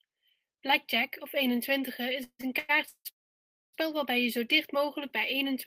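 From 2.23 to 3.07 s the speech breaks into repeated stalls (stutter): four gaps, the longest 161 ms, are filled by stretching the last sound, about half of that span. The waveform shows held, fading stretches; the spectrogram shows smeared, repeated slices where packets arrived late.

At 3.09 s a call audio freeze begins, lasting until 3.75 s. It is most likely a jitter buffer running dry while packets were held up. After a brief continued tone, about 620 ms of silence follows: a flat waveform and a blank spectrogram band before the speech resumes.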